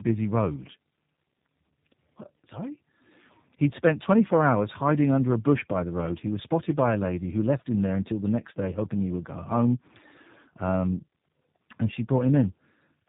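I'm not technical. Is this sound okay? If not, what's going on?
No, the whole clip, from start to finish, has a fault called tandem speech coding. The call passed through two different speech-squeezing systems one after the other, so the voice was squeezed, unpacked and squeezed again. Nothing above about 3.8 kHz survives, which gives the muffled, phone-like tone. What sets this apart from a single poor connection is the doubled damage: the speech sounds rough and warbly in a layered way.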